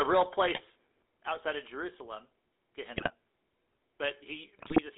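Throughout the clip, the speech passes through the GSM full-rate codec, whose sound fits the 13 kbps original GSM coder. It rebuilds the voice from a vocal-tract model fed by a thinned, regularly pulsed excitation, and the line is limited to roughly 300 Hz to 3.6 kHz. The codec damage is plainly audible: a buzzy, gravelly roughness over every syllable, with no air or sibilant detail above the band.

GSM bit errors then corrupt the decoder's parameters three times. From 0.55 to 0.61 s, damaged filter, pitch or gain values distort a few frames, giving a brief squawk. From 2.94 to 3.14 s, and again from 4.58 to 4.80 s, a higher error rate of a few percent hits longer stretches of frames. The spectrum bends and the level jumps, so the voice breaks into gargling pops and squawks for about a fifth of a second each time.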